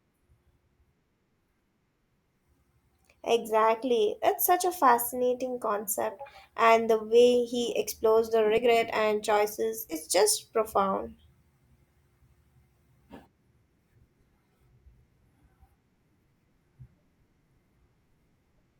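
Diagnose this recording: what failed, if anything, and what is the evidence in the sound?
The codec stage failed: compressed frames skipped. At 8.57 s, after "way he explores the", about one 20 ms frame is lost. At 9.89 to 9.96 s, before "just profound", roughly two frames vanish. At each gap the audio jumps ahead by the length of the missing frames.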